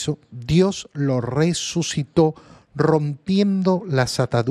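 From start to end, the speech sounds dull and gurgling, with a granular edge. This is likely MP2 compression at a low bitrate, around 80 kbps. Starved of bits, upper sub-bands switch off and flicker back. The remaining bands are coarsely quantised.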